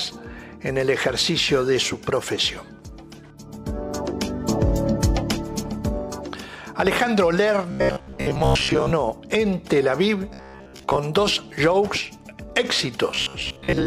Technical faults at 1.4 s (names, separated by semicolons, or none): none